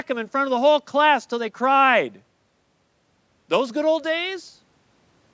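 No faults are present in the speech; the audio has passed through a call's microphone processing, which leaves nothing above 8 kHz and trims the lowest bass with its high-pass filter, both normal for that path.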